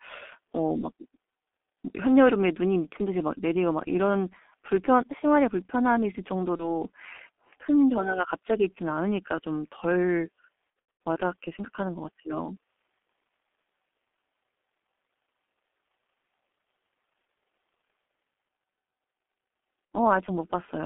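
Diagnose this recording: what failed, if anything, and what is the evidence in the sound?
The codec stage is at fault throughout: G.723.1 coding. The speech is confined to roughly 250 Hz to 3.5 kHz and sounds muffled and rough, with smeared consonants. That fits a low-rate 6.3 kbit/s stream whose slow-updating vocal model cannot track fast articulation.

The network stage shows VoIP packet loss concealed by the speech codec. A 30 ms gap at 6.56 to 6.82 s leaves a brief concealed smear. From 10.70 to 11.00 s, 240 ms is lost in scattered bursts with a longest run of 90 ms, giving fading stretches of extrapolated sound. A 60 ms loss occurs at 19.95 s. The decoder extrapolates its last pitch and filter at falling gain, and recovery lags afterwards.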